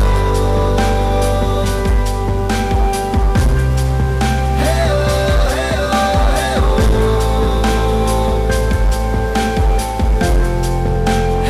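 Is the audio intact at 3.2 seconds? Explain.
No. Hard clipping runs through the whole clip. The signal is driven about 10 dB over the chain's limit, flattening around a tenth of its samples into harsh fuzz.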